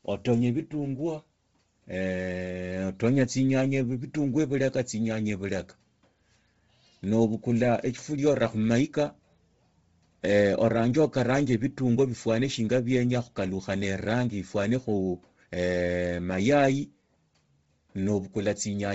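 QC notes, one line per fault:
throughout, Bluetooth LC3 compression: the speech is heavily smeared and grainy, with nothing above 7.7 kHz, which fits a low-bitrate link around 24 kbps in 7.5 ms frames, likely LC3.
7.93 to 18.95 s, channel delay (comb filtering): one channel runs about a sample late and mixes to mono, so the top rolls off and the sound turns slightly duller.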